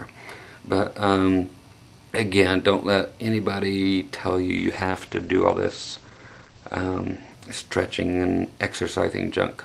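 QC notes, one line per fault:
4.59–9.21 s, call bitrate drop: the encoder codes coarsely and cuts the band from 20 kHz to 8 kHz, which fits a fall from 48 to 12 kbps, so the sound turns muffled and rough.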